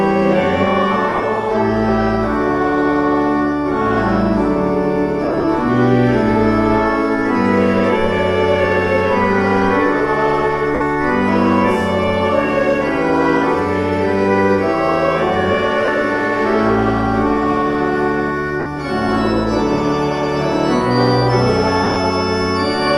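At 1.09, 5.24, 10.74, 15.85, 18.60 and 21.84 s the audio briefly dissolves into a noisy, smeared wash in which tones lose their clarity. The missing stretches total 30 to 110 ms each, and at 1.09, 5.24 and 21.84 s they are broken into short scattered gaps spread over up to 200 ms. These are lost LE Audio frames. When Bluetooth packets drop, the LC3 decoder fills each gap by reusing the last spectrum with randomised signs, and the numbers of frames lost point to 10 ms frames.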